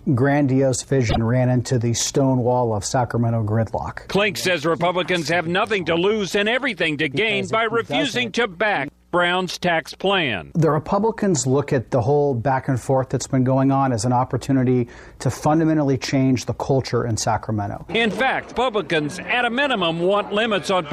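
At 1.09 s the audio jumps forward, and the stretch up to 1.18 s comes out garbled instead of continuing cleanly. The likely cause is a broken MP3 bit reservoir: frames were lost, and the following frames, each about 26 ms long, reached back for borrowed data and decoded someone else's bytes. On a spectrogram this shows as a roughly 95 ms block breaking the surrounding pattern. The waveform shows an abrupt discontinuity at its edges.

From 17.11 s to 18.28 s come six CD scratch ticks, evenly spaced at roughly five per second. A scratch destroys more data than error correction can rebuild on each rotation, so the player patches or mutes a few samples, at most a few milliseconds each time. These are heard as regular clicks of uneven strength. On a spectrogram they form thin vertical lines at equal intervals, and in the waveform they appear as tiny notches or flattened spots.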